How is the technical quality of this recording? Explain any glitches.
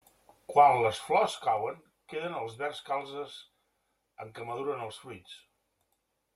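The recording has one glitch, zipper noise during a level drop in the speech near the start.

From 0.72 to 1.82 s, the gain was lowered in discrete 2 dB jumps rather than a continuous ramp, at about seven steps a second, for a total cut of roughly 10 dB. Each jump changes the waveform abruptly and leaves a small click, so the fade carries a fast ticking, zipping texture while the level falls.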